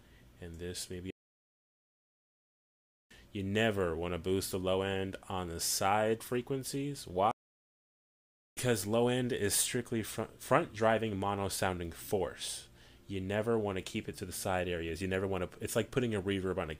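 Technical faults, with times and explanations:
1.10 to 3.11 s and 7.31 to 8.57 s, playback stall: The sound cuts off in mid-flow and the output falls silent. The first gap lasts 2 s and the second about 1.25 s. Neither is a pause in the material itself. The likely cause is that the player ran short of data, or its output thread was held up. Nothing reached the output until it recovered, so the sound simply stops and then starts again.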